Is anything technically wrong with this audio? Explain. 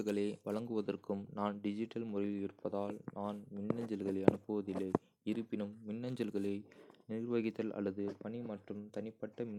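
Yes. From 0.60 s to the end, the speech turns dull and muffled, its treble sloping smoothly away to about 8 dB down at 10 kHz relative to 1 kHz. This is de-emphasis applied wrongly: a treble-cutting filter meant to undo pre-emphasis was applied where no boost existed, or was applied twice.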